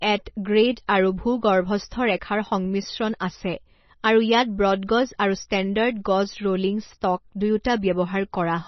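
From start to finish the speech sounds dull and watery, with a swirling, bubbling quality as faint detail flickers in and out, and s sounds come out thin and chirpy. Nothing remains above about 5.9 kHz, a hard treble ceiling. The likely cause is heavy MP3 compression at a low bitrate, around 24 kbps: the encoder cut the top band and dropped weaker frequency components frame by frame, producing the swirl.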